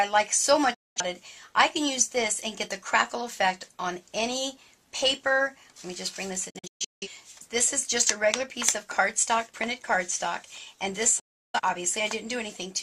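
Digital broadcast dropouts occur at 0.74 to 1.02 s, 6.50 to 7.08 s and 11.19 to 11.60 s. Each time the receiver lost valid frames and muted, fading out in about 8 ms. The first and last are single gaps of 0.21 s and 0.34 s. The middle one breaks into several short holes over about half a second, totalling 0.38 s, with the longest run 0.17 s. Gap lengths fit frames of roughly 43 ms.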